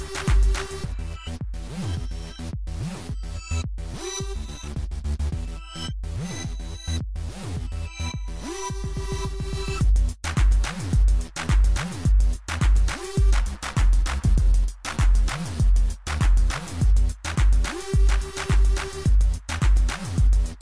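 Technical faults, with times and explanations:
13.37–16.77 s, wrong sample rate: for this stretch the samples are clocked out more slowly than they were captured, with no rate conversion, so everything runs at about 0.92 times normal speed and drops about 1.5 semitones together. The ratio fits audio recorded at 24 kHz being played at 22 kHz. Because pitch and tempo are tied to the same clock, the sound turns slightly lower and more sluggish, then snaps back at the end.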